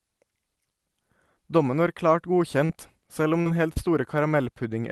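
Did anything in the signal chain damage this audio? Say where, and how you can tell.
Yes, at the network stage: brief smears or wobbles at 2.65 to 2.71 s, 3.41 to 3.47 s and 3.73 to 3.88 s are short concealed packet loss. About 20 to 40 ms of audio arrived too late, so the decoder extended the preceding sound and blended back.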